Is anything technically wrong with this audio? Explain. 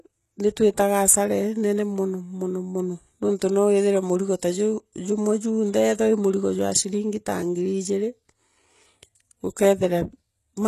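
Yes. Throughout the speech, the treble sounds like HE-AAC compression that is likely rebuilding it by spectral band replication, with treble copied up from lower bands. Sibilants come out gritty and lispy, nothing survives above 12.3 kHz, and the damage is plainly audible, which points to roughly 16 kbps.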